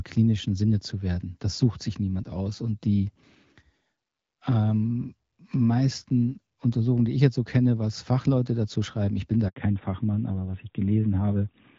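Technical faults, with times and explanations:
9.48–9.56 s, handover gap: the speech fades out within a few tens of milliseconds and an 80 ms silence follows. The call was being passed between networks, no speech frames arrived during the switch, and whatever was said then is gone.
9.56 s to the end, fallback to narrowband: the light HD Voice sound, consistent with AMR-WB around 12.65 kbit/s, gives way to a duller, rougher tone with nothing above 4 kHz. This points to the call dropping to the narrowband AMR codec at about 12.2 kbit/s.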